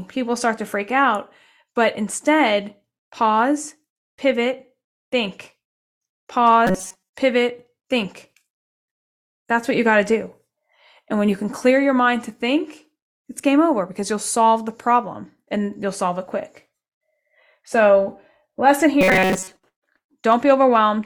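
At 6.67 s the speech collapses into a flat, metallic buzz that lasts until 7.13 s, just before "pivot think", and it happens again from 19.01 to 19.64 s. That's robotic sound from repeated short buffers. Audio is most likely arriving too slowly, so a tiny chunk gets looped over and over to cover the gap. Here the looping covers most of each stretch. The buzz sits at 188 Hz, which fits a chunk of about 5.3 ms.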